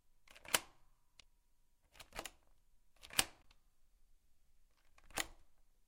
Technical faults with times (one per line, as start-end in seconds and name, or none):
1.19-1.22 damaged data in a compressed stream
3.41-3.46 damaged data in a compressed stream